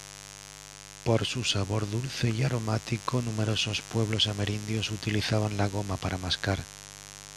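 A switching source such as a dimmer or rectifier, or a missing shield, is letting sharp spikes into the signal twice per 50 Hz mains cycle, producing mains buzz for the whole clip. Its harmonics stack into a steady, raspy buzz sitting roughly 15 dB under the speech.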